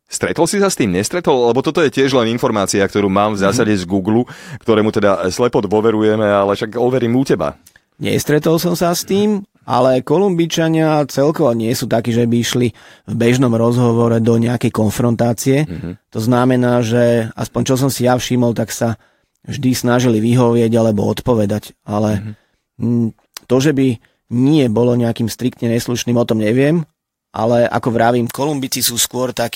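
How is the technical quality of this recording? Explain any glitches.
There is one glitch, in the last second or so. From 28.27 s to 29.55 s, pre-emphasis is left on: the treble lift of a J.17 curve is applied without the matching de-emphasis, raising 10 kHz about 11 dB above 1 kHz. The speech turns thin, bright and hissy-sibilant. Unlike a high-pass cut, the lows stay intact; only the top end climbs steadily.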